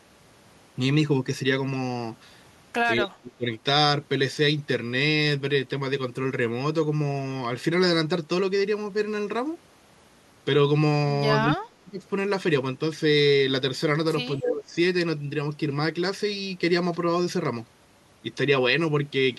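At 2.99–3.46 s, 11.47–12.03 s and 14.37–14.75 s the speech drops by roughly 30, 35 and 15 dB for about 0.5, 0.5 and 0.4 s. This is likely speech suppressed in double talk: an echo canceller ducks the talker along with the far-end echo. Inside the last dip, at 14.39–14.49 s, an echo leak appears. A copy of the speech arrives 229 ms late and only about 5 dB quieter, likely loudspeaker pickup that the canceller failed to remove. The clear, fixed delay sets it apart from room reverberation.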